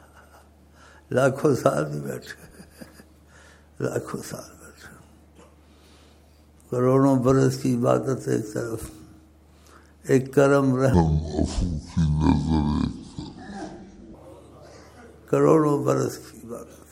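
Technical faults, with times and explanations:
10.94–14.14 s, section at the wrong speed: for just over three seconds the sound plays at about 0.61 times its proper rate, so it drags noticeably and drops by roughly ten semitones, close to an octave lower. Because speed and pitch move together and snap back at 14.14 s, this is likely a playback or editing stage running that stretch against the wrong clock rather than any change in the source itself.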